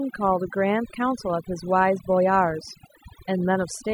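Overdone noise removal runs through the whole recording. The noise reduction was pushed so hard that frequency bands close to its noise estimate are cut almost to nothing, taking the softer parts of the speech with them. The background drops to near silence dotted with twinkling specks.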